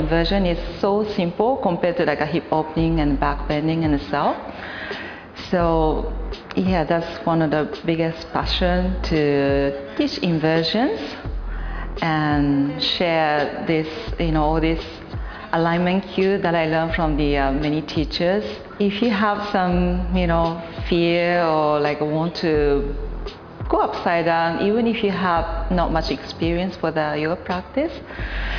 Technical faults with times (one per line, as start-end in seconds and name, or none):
none